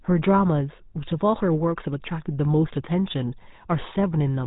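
It's a speech clip that's been through the GSM full-rate codec the whole way, and the damage is plainly audible: a buzzy, gravelly grain from the pulse-driven vocal-tract model, with nothing above 3.8 kHz. The roughness fits the 13 kbps full-rate codec.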